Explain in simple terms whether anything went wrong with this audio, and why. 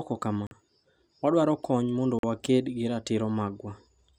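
Two short Bluetooth stalls interrupt the speech, at 0.47 to 0.51 s and 2.19 to 2.24 s. Each goes silent for about 44 ms and then carries on, likely because wireless interference briefly starved the headphones of audio, rather than crackling.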